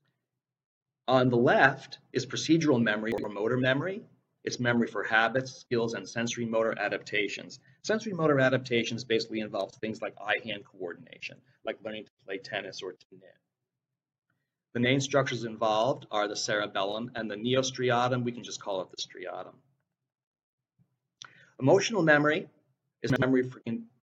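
Chunks out of order at 3.12–3.24 s and 23.10–23.22 s: one 60 ms chunk plays a chunk late, leaving a brief jumbled moment with hard joins.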